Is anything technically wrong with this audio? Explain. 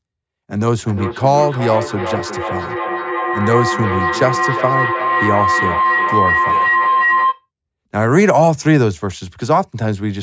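Yes, there's a feedback howl from 0.84 to 7.46 s. Two devices on the call are looping mic to speaker, so a ring near 1 kHz builds to about 2 dB under the speech, with the loop repeating roughly every 0.4 s.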